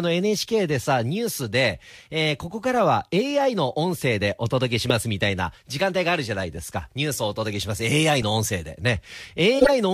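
A speech recording with corrupt frames decoded. Damaged compressed frames were played anyway, producing a loud blip at 4.90 s, a quieter one at 8.22 s, and a longer, louder burst from 9.55 to 9.73 s.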